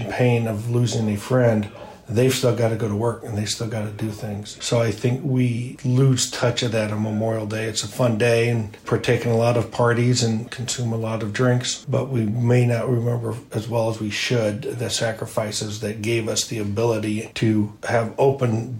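No technical faults can be heard anywhere in the recording; the signal stays intact and continuous throughout.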